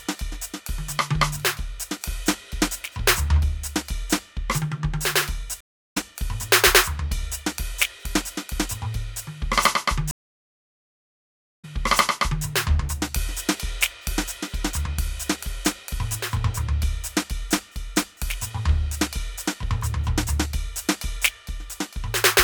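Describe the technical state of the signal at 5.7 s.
At 5.7 s the music sits inside a stream reconnect (5.61–5.97 s): the connection dropped, leaving a 306 ms blank gap on waveform and spectrogram, then a fresh decoder resumes about 0.3 s later.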